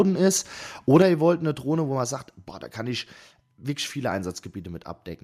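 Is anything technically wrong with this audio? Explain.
Yes, there are two problems.

From 0.94 to 1.02 s there is microphone overload. The peaks run about 3 dB past the converter's ceiling, likely from an input volume set too high. A small share of samples gets flattened at the top. This adds a harsh, crackly edge to the loudest part.

The microphone volume is stepped down at 1.02 s and again at 2.04 s. The first drop is about 5 dB, the second about 2 dB. Both the voice and the background fall together, abruptly. The likely cause is call software reacting to a loud or clipping input by lowering the device's input gain.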